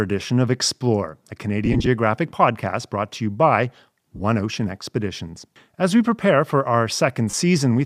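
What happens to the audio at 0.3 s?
Nothing goes wrong at 0.3 s; the speech there is intact, carried through what sounds like light LC3 compression that leaves no audible fault at that point.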